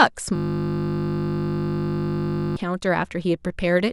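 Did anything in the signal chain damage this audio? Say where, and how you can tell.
Yes, a system hang loop at the driver buffer: from 0.36 to 2.57 s, one 20 ms slice of speech replays, buzzing steadily at 50 Hz.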